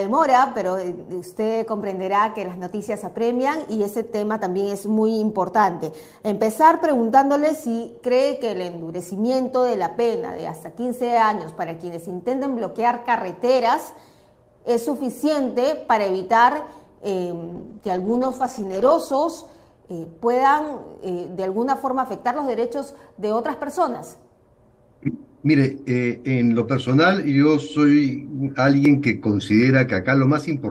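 A call recording with one clear problem: a call bitrate drop from 17.5 s to about 19.03 s. The bandwidth estimate dipped, so the encoder got far fewer bits to work with and started coding the audio much more coarsely. It bottoms out for roughly 1.46 s, and the rougher, smeared quality there fits a fall from around 32 kbps to around 13 kbps. After 19.03 s the bits come back and the sound firms up again.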